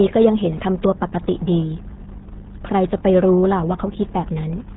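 Speech, and it's been squeezed through the RealAudio 14.4 codec for the whole clip. The band stops dead at about 3.8 kHz, so there's no air or sibilance, and the heavy codec damage makes everything sound muffled and gargly. That's what happens when a dial-up-era speech coder throws away most of the signal, and the degree of smearing fits a rate of around 8 kbit/s.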